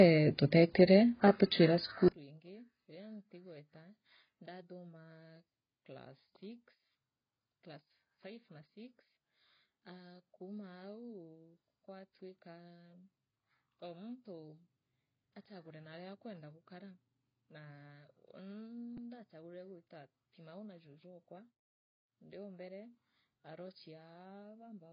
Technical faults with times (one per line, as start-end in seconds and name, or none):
0.00-24.93 AAC compression
2.08-24.93 one channel inverted
18.97 repeated buffer